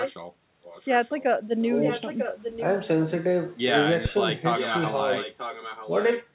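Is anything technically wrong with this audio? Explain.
Yes, two faults. Echo leak: a far-end echo canceller likely failed to remove loudspeaker pickup, so a copy delayed by about 944 ms returns at 0.0–0.13 s, 0.64–1.24 s, 1.81–2.8 s and 4.55–6.04 s. It is strong in the first and third stretches, faint in the second and moderate in the last. Phantom power thump: a supply switched on a live input sends a step through the coupling capacitors, giving a deep thump at 4.06–4.17 s that decays within about 26 ms.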